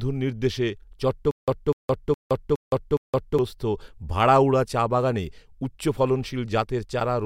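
From 1.31 s to 3.39 s the speech breaks into a stutter with silent gaps. The same 249 ms fragment plays five times, each followed by about 166 ms of dead digital silence, so it repeats at a steady 415 ms period. The likely cause is a stalled player or stream that replayed its last buffered fragment on every retry and then ran dry. The audio due in that span never arrives and is lost.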